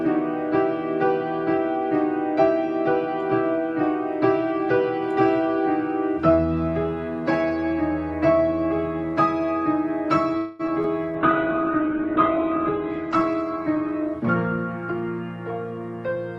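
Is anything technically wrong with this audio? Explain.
Yes, there are three kinds of fault, all in the last six seconds of the clip.

Call audio freeze, 10.37 to 10.61 s: the sound stalls into a fading buzz-like continuation for about 220 ms, then resumes exactly where it stopped, with nothing skipped. The likely cause is delayed packets draining the jitter buffer, so the receiver stretched the last sound while it waited.

Short concealed packet loss, 10.67 to 10.70 s and 10.82 to 10.86 s: two brief smears. About 40 ms, then 20 ms, of audio never reached the decoder, and the gaps were patched by extending the preceding sound before blending back. The first also trims the delay built up during the freeze by roughly 40 ms.

Call bitrate drop, 11.17 s to the end: the audio turns rough, watery and muffled, with the top cut off around 4 kHz, versus the 12 kHz ceiling heard earlier through the Opus path. 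This fits the encoder being pushed from 48 to 8 kbps, with the lowest rate held for about 1.5 s.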